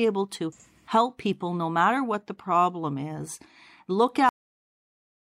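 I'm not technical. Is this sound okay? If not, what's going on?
No. There's a cut-off end at 4.29 s: the speech stops abruptly in the middle of a sound and drops straight to dead silence for the final second. The last stretch of audio was never recorded or played out, so nothing fades naturally.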